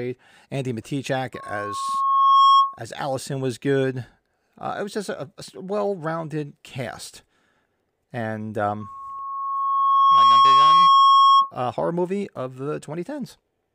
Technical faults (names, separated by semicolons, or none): loudspeaker feedback squeal